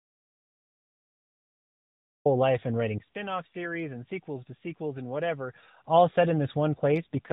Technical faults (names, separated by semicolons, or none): audio dropout to silence; input switched to a poorer device; AMR rate drop